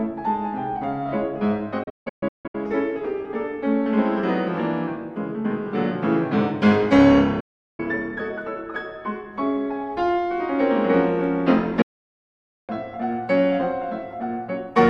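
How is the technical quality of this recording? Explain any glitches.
The recording has three digital broadcast dropouts, at 1.83 to 2.55 s, 7.40 to 7.80 s and 11.82 to 12.70 s. In each one the receiver stopped getting clean frames, through signal loss or failed checksums, and muted until good ones returned. Each cut has a quick fade of about 8 ms, so it drops to silence fast. The first dropout is choppy, a few short holes spread over 0.7 s with the longest lasting 160 ms. The later two are solid gaps of about 0.4 s and 0.9 s. The gap lengths fit audio frames of about 32 ms. Whatever was broadcast during these gaps is gone for good.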